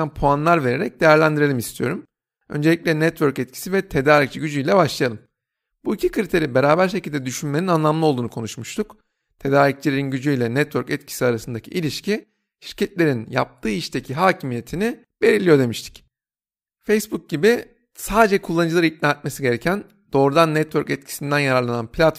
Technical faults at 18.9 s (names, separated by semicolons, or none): none